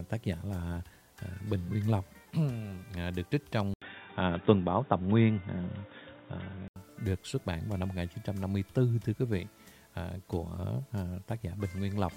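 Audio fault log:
3.74–6.76 s, input switched to a poorer device: after an 80 ms gap the sound turns dull and boxy, with nothing above 3.8 kHz, a level shift of about 5 dB and a faint new noise floor. It clears at 6.76 s, likely because capture moved to a narrower-band microphone and back.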